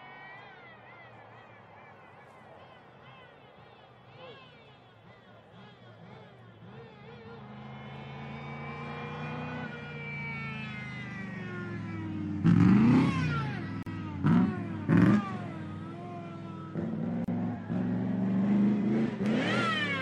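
At 13.83 s the sound drops out for about 37 ms, then again at 17.24 s for about 33 ms. These are gaps at joins of encoded pieces. Untrimmed encoder delay and end padding leave silence. Edges are smeared by the codec, and the sound resumes where it stopped.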